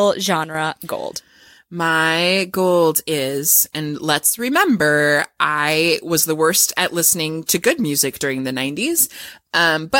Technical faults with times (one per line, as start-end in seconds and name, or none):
0.44-0.55 one channel drops out
4.30-4.39 one channel drops out